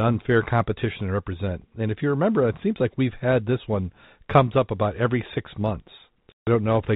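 Speech over G.711 telephone coding shows packet loss filled with silence from 6.32 to 6.47 s: a 150 ms hard-edged gap, consistent with several consecutive 10 ms packets dropped.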